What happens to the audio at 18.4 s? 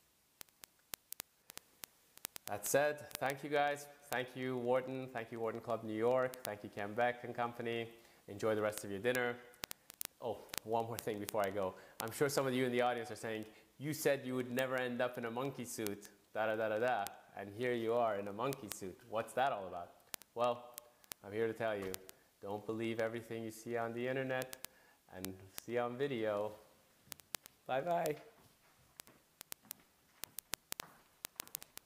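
Word clock ticks run through 18.4 s, part of a train lasting from 0.11 s to the end. An unlocked receiving clock, drifting by roughly 700 ppm, slips a single sample about every 40 ms, giving steady clicks. A spectrogram shows thin, evenly spaced vertical lines, and the waveform shows one-sample steps.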